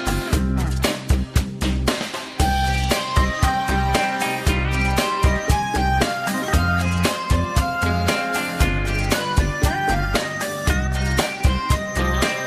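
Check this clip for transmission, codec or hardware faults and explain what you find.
No transmission, codec or hardware faults can be heard.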